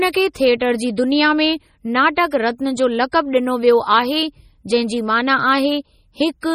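From the start the speech sounds watery and swirly, with chirpy, metallic sibilants, which likely comes from heavy MP3 compression at a low bitrate, around 32 kbps. A spectrogram shows a hard ceiling at 17.5 kHz and patchy high bands that flicker between frames.

Pre-echo appears from 0.33 to 0.36 s, then at 0.60 s just before "जी दुनिया में", at 0.96 s before "दुनिया में", at 2.31 s, and at 3.12 s after "रत्ना जो". The coding noise spreads ahead of each sharp onset, so a brief hiss of 10 to 21 ms precedes it and blurs the attack. On the waveform this shows as fuzz in front of the rise, and on a spectrogram as a broadband smear before each transient.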